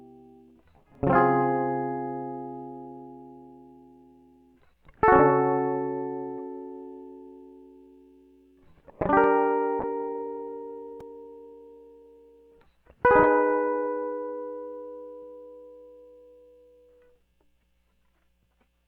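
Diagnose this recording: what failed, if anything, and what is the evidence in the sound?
A call bitrate drop at the codec stage: bandwidth estimation pushed the encoder down, consistent with roughly 64 kbps falling to about 22 kbps. From 9.81 s to 15.39 s the music turns coarse, watery and dulled, bottoming out for about 3.5 s before the fuller sound returns.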